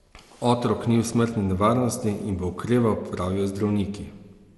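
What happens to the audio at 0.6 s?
At 0.6 s the speech is inside a stretch of generation loss that runs the whole clip. The likely cause is MP2 coding at 96 kbit/s repeated around ten times, each decode and re-encode quantising again on a shifted frame grid so noise and spectral gaps pile up. The result is a swirly, hollow, smeared sound beyond what that bitrate alone gives, with blurred attacks and nothing above about 11.8 kHz.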